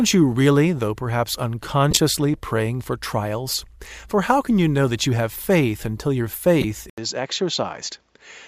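Speech with two bursts from a corrupt frame being decoded: from 1.91 to 1.97 s, between "you really though perhaps" and "praying for trials", and from 6.61 to 6.64 s, after "have faith until your". Damaged compressed data was played anyway, so misread gains and codes put energy at the wrong frequencies. The first is the louder, and the second peaks a few dB below it. On a waveform each is a sudden spike. On a spectrogram each is a short vertical smear that does not follow the voice's harmonics. At 6.90 s the sound turns duller and boxier to the end, most likely because the input switched to a poorer device. An 80 ms silence marks the switch, which appears as a flat gap in the waveform. After it the level is about 5 dB lower, a new noise floor sits around 45 dB below the speech, and the spectrogram shows a hard ceiling with nothing above 7.6 kHz.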